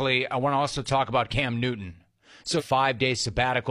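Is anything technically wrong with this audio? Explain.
Yes. At 2.56 to 2.62 s the speech jumps abruptly forward with a short blip, and a stretch of the programme is missing. This is likely a stream segment skipped: one chunk of the segmented stream failed to load, and playback resumed from the next.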